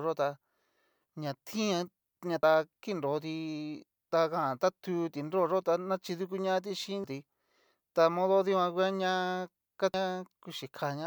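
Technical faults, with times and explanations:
2.43 s, 7.04 s and 9.94 s: damaged data in a compressed stream. Corrupted bytes derail the decoder, which loses frame sync and hunts for the next header, leaving a brief chirp, squawk, click or short hole in the speech.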